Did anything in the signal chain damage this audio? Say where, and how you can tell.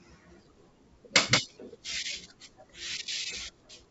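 No, nothing here points to damage in the chain: this speech has been through G.722 wideband telephone coding at 64 kbit/s, which shows up as nothing above about 7.7 kHz, and that ceiling is simply how the codec is built rather than a sign that anything broke along the way.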